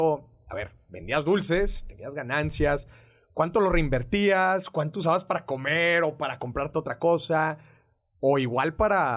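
No technical faults can be heard anywhere in the speech.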